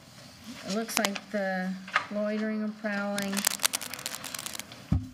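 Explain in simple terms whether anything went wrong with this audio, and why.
Something did go wrong: a worn cable, connector or control carrying an electrical voltage was likely moved, so its contact kept changing from instant to instant. That is cable scratch noise. You hear it as rough, uneven scratching or rustling over the sound, first briefly from 0.93 to 1.09 seconds, louder than the sound itself, then for longer from 3.18 to 4.65 seconds, about as loud as the sound.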